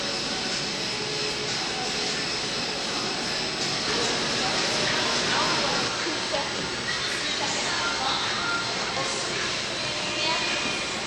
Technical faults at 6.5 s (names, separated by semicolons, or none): USB whine